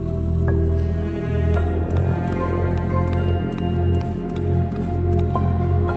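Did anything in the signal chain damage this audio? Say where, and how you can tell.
No, nothing in the signal chain damaged this audio. It has passed through a WebRTC call path, and the top end stops at about 8 kHz, which fits an Opus codec running at roughly 32 kbps.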